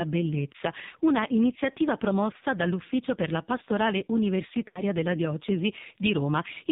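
Throughout, the speech has passed through the AMR narrowband mobile codec at a very low bitrate, with the heavy, buzzy, synthetic quality pointing to around 5.9 kbps. Everything above 4 kHz is gone, and the vocal-tract model leaves the voice thin and artificial.

From 4.68 to 4.82 s, lost AMR speech frames cause a dropout. The decoder fills the gap by repeating its last good pitch and vocal-tract settings at falling gain, and a gap of this length fits about four 20 ms frames. The voice smears briefly, fades toward silence, then returns rough.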